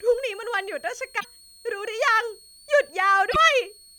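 A thin, high whistle sits under the speech for the whole clip, wandering between about 4.28 and 4.45 kHz and running roughly 30 dB below the talker. That's a switching supply whistle: a power supply converter dropping into an audible burst mode or beating against another one, so its frequency shifts as the load moves.

There are also two short glitches, one from 1.16 to 1.25 s and another from 3.28 to 3.36 s, each lasting about 80 ms. These come from damaged data in a compressed stream. The bytes there were corrupted, so the decoder either misread or rejected those frames, lost sync and had to hunt for the next good frame header. What you hear is a brief glitch in the speech.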